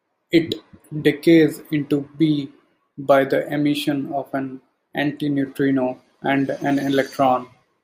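Speech, with no technical fault to be heard anywhere in the recording. There is nothing that calls for a time stamp or a cause.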